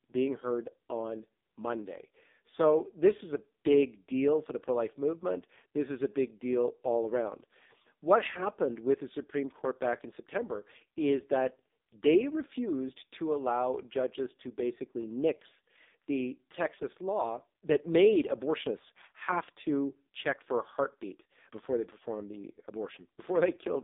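Throughout, heavy AMR narrowband mobile codec damage makes speech buzzy and synthetic, which fits a 5.15 kbps mode; the spectrogram is empty below 250 Hz and above 3.7 kHz.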